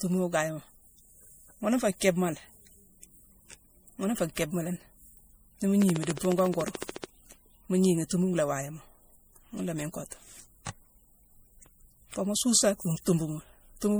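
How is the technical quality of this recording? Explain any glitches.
The recording has two audible faults, one lasting the whole clip and one brief burst in the middle.

Generation loss, throughout: the speech sounds swirly, hollow and smeared, with blurred attacks, likely from several rounds of MP3 re-encoding near 64 kbit/s compounding quantisation noise.

Train of clicks, 5.82 to 7.05 s: about twenty near-identical, evenly spaced ticks at 14 per second, roughly 15 dB above the speech, likely from electrical interference.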